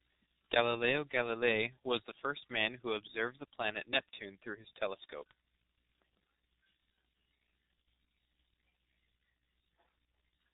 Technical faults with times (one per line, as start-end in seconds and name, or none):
0.00-10.54 G.723.1 codec